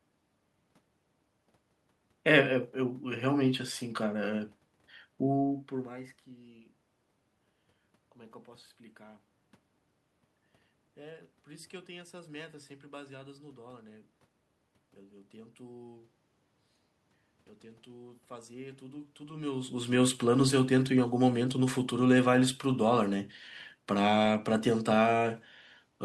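No technical faults are present.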